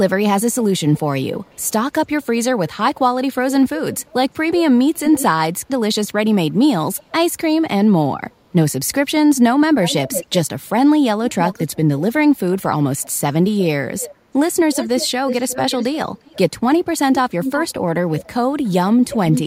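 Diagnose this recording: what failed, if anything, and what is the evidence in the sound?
Echo leak in call processing, likely a far-end loudspeaker echo canceller letting the played voice back into its microphone. A delayed copy trails the speech by about 350 to 360 ms at 0.52–1.72, 3.98–5.24, 6.97–7.12, 8.30–8.34, 9.84–10.33, 11.3–16.4 and 17.42–19.4 s, varying from roughly 40 dB below the speech to about 5 dB below. Unlike room reverberation, it is a distinct copy at a fixed lag rather than a smooth decay.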